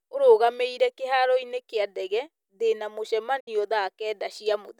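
At 3.40 s the speech is hit by a digital broadcast dropout lasting until 3.48 s. The receiver stopped getting decodable frames, either because the signal was lost or because frames failed their checksum, so it muted the output until valid data resumed. The level drops to silence over roughly 8 ms rather than cutting hard, leaving a 64 ms hole, which fits two missing frames of about 32 ms each. Whatever was transmitted during that gap is simply gone.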